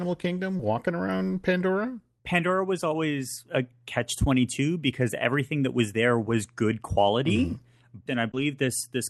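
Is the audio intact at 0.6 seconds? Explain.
No. From 0.57 to 0.61 s a short concealed packet loss replaces about 20 ms of speech with extrapolated sound, giving a brief smear rather than the silent gap of a plain dropout.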